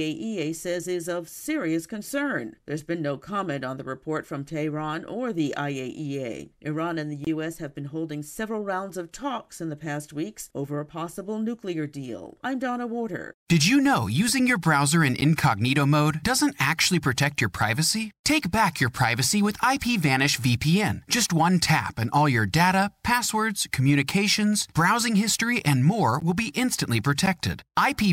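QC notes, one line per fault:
7.25–7.27, 15.21 and 27.26 s, block of digital silence: the sound drops to silence for about 23 ms, then twice for about 12 ms, with no fade. The lengths fit 1024- and 512-sample buffers left unfilled. Unlike a codec error, each is a gap where sound is removed rather than added.
26.20–26.23 s, corrupt frame decoded: a brief burst peaking around -20 dBFS spans a few frames. Damaged bits sent energy to the wrong frequencies. Unlike a dropout, sound is added rather than removed.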